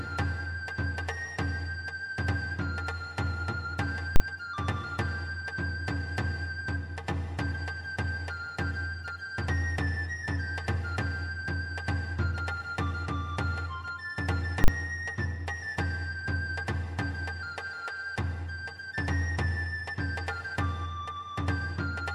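At 4.16 s and again at 14.64 s the output jumps to one extreme value for a 40 ms block, ending at 4.2 s and 14.68 s. Both are invalid numbers at full scale: a calculation produced infinite or invalid values, which were clamped to the largest positive or negative value and held there for the whole block. The sound is replaced by a flat, pinned level, and the edges into and out of it come so close together that each event is heard as a single very loud bang.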